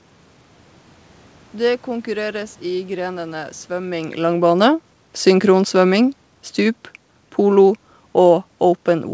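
From 4.2 to 6.86 s, the automatic gain falling is the fault. The gain control judged the input too loud or its background noise too strong, just after the talker shifted position around 4 s, and lowered its gain by about 4 dB, so the speech and room noise sink together.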